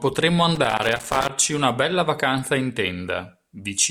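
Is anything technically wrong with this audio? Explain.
Yes. From 0.55 to 1.29 s the speech carries loose connector crackle, ending just before "una bella vacanza in". A worn contact making and breaking chops the signal, giving irregular scratchy bursts; the waveform shows ragged dropouts and spikes, the spectrogram scattered broadband vertical streaks.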